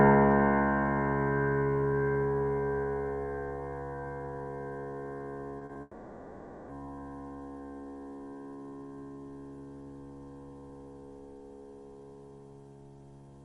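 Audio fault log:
5.59 to 5.77 s, short concealed packet loss: three bursts of 20, 40 and 20 ms at 5.59, 5.65 and 5.73 s missed the decoder, so extrapolated sound bridges each gap as brief smears or wobbles.
5.81 to 6.71 s, long network dropout: likely a stall in delivery left about 0.88 s missing; the receiver stretches the last sound into a fading buzz or hiss before real audio resumes.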